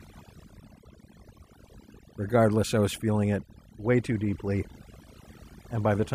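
Overdone noise removal runs through the whole clip: a noise reduction stage set too aggressively cuts individual frequency bands whenever they approach its noise estimate, taking softer parts of the speech along with it. Pauses collapse into near silence sprinkled with glittery specks.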